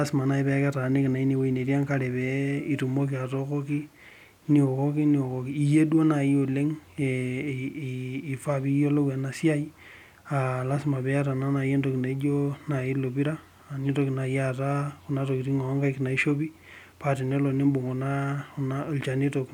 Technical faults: none

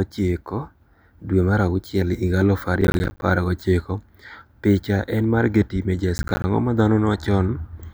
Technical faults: processor overload crackle

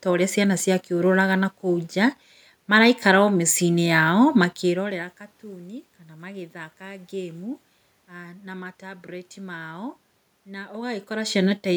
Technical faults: none

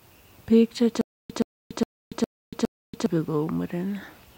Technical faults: stutter with silent gaps

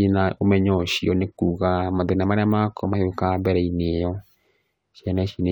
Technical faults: none

